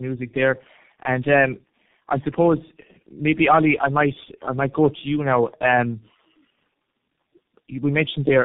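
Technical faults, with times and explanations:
Throughout, tandem speech coding: the speech sounds rough, muffled and warbly, the kind of build-up you get when about three low-rate speech codecs are chained, each re-encoding the previous one's damage. The final stage sounds like G.723.1, and nothing survives above 3.7 kHz.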